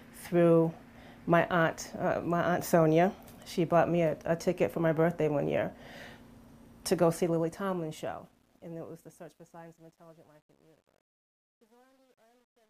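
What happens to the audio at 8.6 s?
At 8.6 s the sound is partway through a fade carrying truncation distortion, which runs from 6.98 s to the end at 12.7 s and is at its worst from 9.05 s on. The fade was applied with too few bits and no dither, which fits a resolution of about 10 bits. As the level drops, the waveform flattens into coarse square steps, and the quiet tail turns gritty. A spectrogram shows hash spreading across the band rather than clean decay.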